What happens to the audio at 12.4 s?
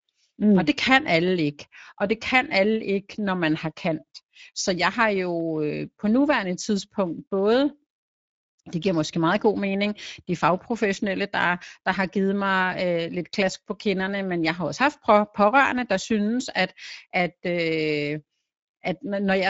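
At 12.4 s you're hearing the same Speex codec damage that runs through the whole clip. It's a CELP speech coder, and here it's starved of bits for the excitation, so the speech comes out noticeably hoarse and grainy. What little sits above 4 kHz is a shaped, noisy fill, with nothing at all past about 7.7 kHz. The plainly audible damage fits a mid-range setting around 17 kbps.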